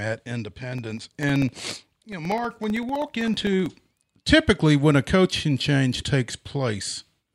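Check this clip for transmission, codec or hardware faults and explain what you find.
One hardware fault: periodic USB or driver dropouts from 0.78 to 4.05 s. Every 64 ms, about a millisecond of speech drops to silence as something stalls the driver, giving a steady ticking. The waveform shows evenly spaced notches, and the spectrogram shows thin vertical broadband lines.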